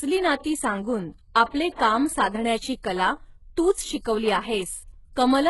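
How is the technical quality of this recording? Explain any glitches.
Heavily compressed speech, start to finish. The damage likely comes from HE-AAC compression at a very low bitrate, around 12 kbps. The top end is rebuilt from copied lower bands, so s sounds come out gritty and metallic, and there's nothing above 11.5 kHz.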